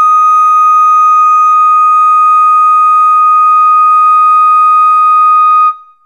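At 1.54 s the music drops abruptly to an adaptive stream at a lower bitrate and stays there to the end. The player apparently switched renditions as throughput fell, with no gap at the switch. Content above 12.3 kHz is gone, which points to a drop from roughly 96 kbit/s AAC to a 16 kbit/s HE-AAC stream with spectral band replication. Codec artefacts are more audible.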